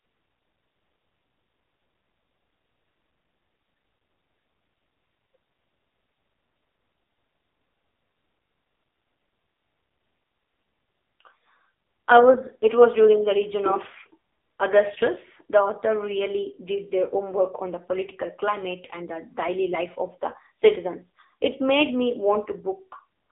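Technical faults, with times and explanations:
Throughout, AMR narrowband mobile codec: the speech is confined to a telephone band of roughly 300 Hz to 3.6 kHz, with nothing above 3.6 kHz. The coder rebuilds the voice from a vocal-tract filter excited by a handful of pulses per subframe. At a low mode, which fits AMR-NB at 6.7 kbps, so few pulses survive that the damage is heavy, leaving the speech buzzy, thin and noticeably synthetic.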